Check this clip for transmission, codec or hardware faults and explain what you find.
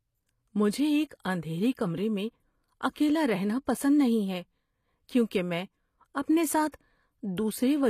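One codec fault runs through the whole speech clip. Throughout, likely HE-AAC compression near 24 kbps rebuilds the treble from copied lower bands, so s sounds turn gritty and metallic, with nothing above 14.9 kHz.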